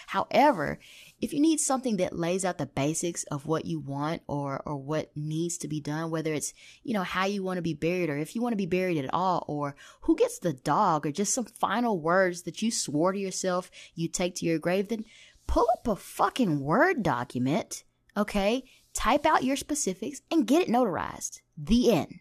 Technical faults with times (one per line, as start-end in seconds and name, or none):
none